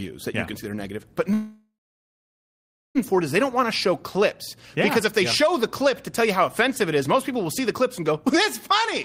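From 1.33 s to 2.98 s the stream most likely suffered a long network dropout. For about 1.6 s no audio reached the receiver, which had to fill the gap itself. It stretches the last sound into a short buzz that fades away, and the final 1.2 s of the gap is plain silence. When the audio returns at 2.98 s it has moved on, and everything from that missing stretch is lost.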